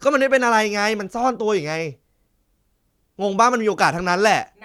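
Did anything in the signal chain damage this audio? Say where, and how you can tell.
No, nothing audible in this speech points to damage at any stage of the chain.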